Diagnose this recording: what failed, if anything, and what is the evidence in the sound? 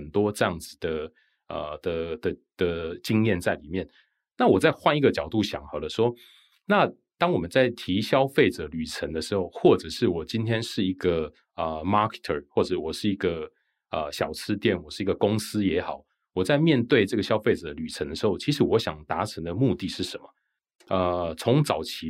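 Nothing in the signal chain points to a failure: the speech arrives as a continuous, stable signal with no audible breaks, level jumps, distortion or timing disturbances at any stage.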